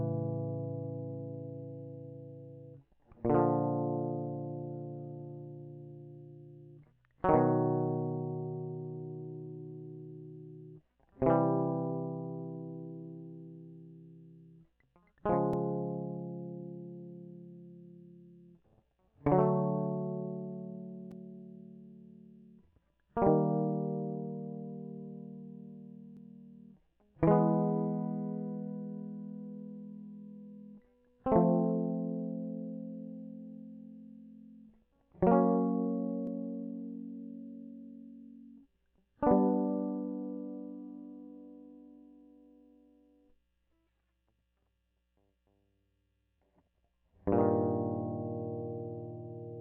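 Listening through the music, nothing stood out as a technical fault at any point.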